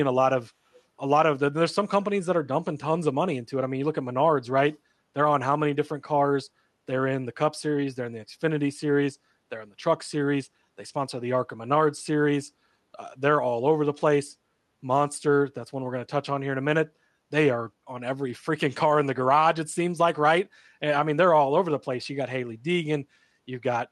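A speech clip carrying an echo leak: at the far end a loudspeaker's output was likely not fully removed by the echo canceller, so a trace of it was picked up and returned down the line. Between 0.75 and 0.82 s this surfaces as a brief, very faint delayed copy of the speech, trailing it by about 0.3 s and sitting far below the talker, heard as a scrap rather than a sustained double. The call path itself caps the audio at about 12 kHz, which fits Opus at around 48 kbps.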